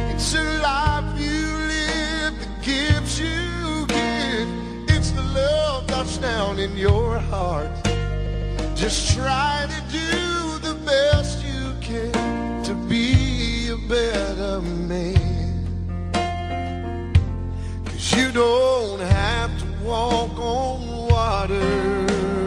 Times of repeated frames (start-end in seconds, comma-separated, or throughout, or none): 8.26-8.49